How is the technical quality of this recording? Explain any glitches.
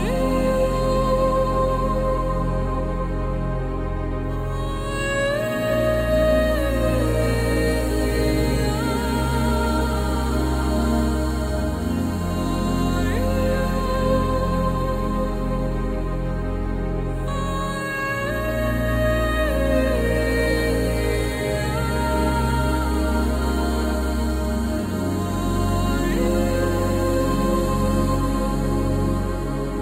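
No glitches or technical faults can be heard here.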